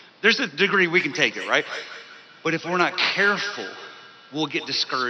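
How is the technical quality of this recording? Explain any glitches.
The recording has a feedback echo between two devices from 0.97 s to the end. Two devices on the same call share a room, so one device replays what the other's microphone sent. That microphone picks the playback up again, which neither echo canceller removes. Each word returns about every fifth of a second, thinner and ringing, peaking about 14 dB below the speech. The faint room noise underneath belongs to the recording itself.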